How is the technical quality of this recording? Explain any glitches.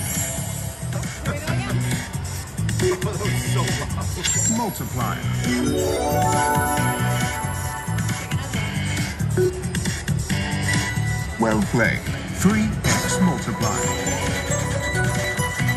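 No technical faults are audible.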